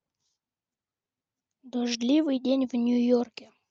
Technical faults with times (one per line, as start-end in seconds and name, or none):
none